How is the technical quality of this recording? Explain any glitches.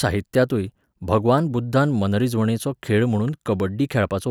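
Nothing in the recording sounds technically wrong.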